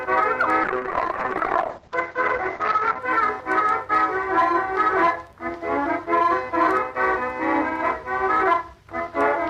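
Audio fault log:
0.64–3.05 s, call bitrate drop: the sound goes rough and watery, with the top end cut from about 20 kHz down to 8 kHz for roughly 2.3 s. That fits the encoder falling from around 48 kbps to 8 kbps before recovering.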